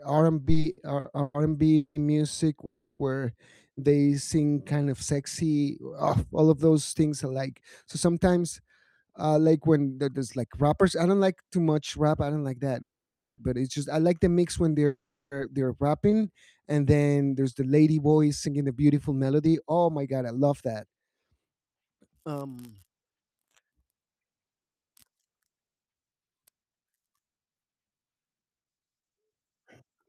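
From 0.45 to 1.97 s, packets kept arriving late, so the jitter buffer ran dry seven times. The receiver stretched the last sound to cover each wait, the longest 190 ms and 480 ms in all. This repeated stall, or stutter, makes the speech drag and stammer for about a third of that span, though nothing is lost.

From 2.65 to 3.01 s is a call audio freeze, likely from packets held up in transit. The receiver extended the last sound for 340 ms as a fading buzz, then resumed where it had stopped.

At 3.96 to 4.88 s a jitter buffer slow-down repeated pitch periods to rebuild its reserve. It added 141 ms and ran at 86% speed at unchanged pitch, so the sounds are drawn out.

After "all of", from 6.71 to 10.71 s, the buffer held too much audio. A jitter buffer speed-up trimmed short pitch periods, removing about a third of a second, so the speech runs at 107% and sounds hurried until "I don't like too".

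Another freeze runs from 12.82 to 13.40 s, likely caused by delayed packets. It inserts 560 ms, nearly all of it silent as the filled sound dies away.

After "like the mix when", from 14.72 to 16.29 s, a slow-down adds 77 ms (96% speed) before "and then there's". Inside it, from 14.86 to 15.33 s, a freeze, likely from late packets, fills 450 ms, 340 ms of it silent.

After "and then there's", from 17.60 to 26.10 s, a long speed-up cuts roughly a second, pushing the speech to 111% and making it noticeably rushed.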